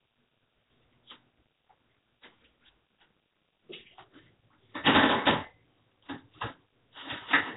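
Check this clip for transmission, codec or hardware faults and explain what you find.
One codec fault runs through the whole clip: what sounds like Nellymoser compression. Nothing reaches above 3.8 kHz, and the audio carries a rough, hissy halo with a smeared, underwater character. That fits Nellymoser Asao at a low rate around 16 kbps, likely Flash's old microphone codec. Its fixed two-bit-per-sample budget starves weak bands, which get filled with noise. That noise fill is the giveaway: a plain low-pass would sound dull but clean, whereas here the damage is heavy and grainy.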